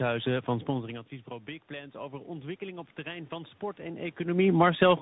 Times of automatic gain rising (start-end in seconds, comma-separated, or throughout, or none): 1.67-4.74